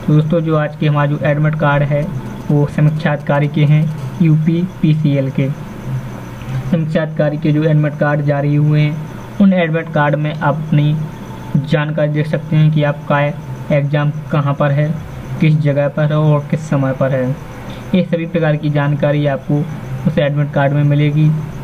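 From 2.02 to 3.93 s there is a galloping dit-dit-dit of brief raspy buzzes, roughly 25 dB under the sound. These are GSM signalling bursts: a nearby 2G phone sends short groups of radio pulses at 217 Hz, which the audio circuit rectifies into audible clicks.

From 3.98 to 5.88 s a continuous hard, raspy buzz at 217 Hz appears, rich in harmonics and about 36 dB below the sound. This is GSM phone buzz: the phone is now in a call, transmitting steadily, and the rectified bursts become a constant drone.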